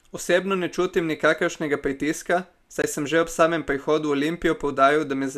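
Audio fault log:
2.82 s, block of digital silence: a brief hole between "ne čutim nikakršnega pritiska" and "sem že ob samem". About 20 ms of samples dropped straight to zero and back without a fade, so each edge is abrupt.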